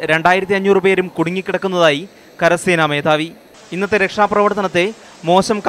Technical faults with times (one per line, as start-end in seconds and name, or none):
none